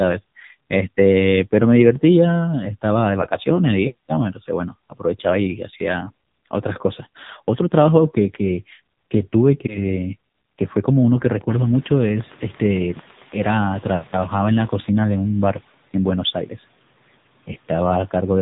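From start to finish the speech has the sound of the AMR narrowband mobile codec, running at what sounds like a low rate of around 6.7 kbps. Everything above about 3.8 kHz is missing, so the voice is boxed in and dull. The codec rebuilds speech from a vocal-tract model fed by a few pulses per short subframe, and with so few bits it comes out heavily buzzy and synthetic. The room noise that climbs by about 18 dB around 11.5 s, still well below the voice, picks up that same swirly warble.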